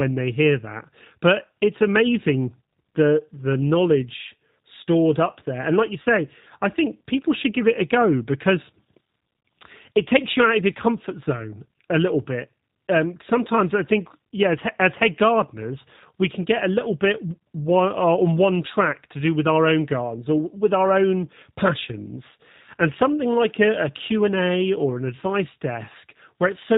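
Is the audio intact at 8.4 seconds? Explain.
No. G.729 codec damage runs throughout, including 8.4 s: the speech, rebuilt from a vocal-tract filter and sparse pulses, lacks everything above 4 kHz and sounds rough and synthetic, unlike simple band-limiting, which fits an 8 kbit/s stream.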